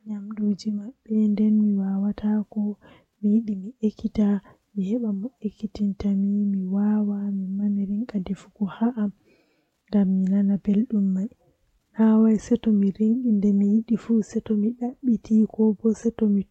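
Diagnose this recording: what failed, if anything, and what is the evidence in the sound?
Nothing in the recording points to any failed stage.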